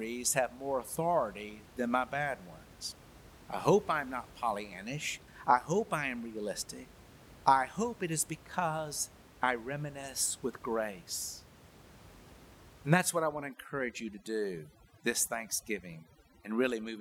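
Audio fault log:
12.99–17.0 s overdone noise removal: bands near the noise estimate are switched off, leaving silence with twinkling specks, not plain muffling.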